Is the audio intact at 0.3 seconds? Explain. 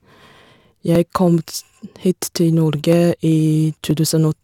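No. At 0.3 s the speech carries a block size mismatch (truncated), present throughout the clip. One stage hands over longer blocks than the next stage takes in, so the tail of every block is dropped, leaving a buzz at about 91.9 Hz, the block rate. Speed stays at 1.0x. That separates it from the padded form, where inserted gaps slow the audio, and from mains hum, which sits at 50 or 60 Hz.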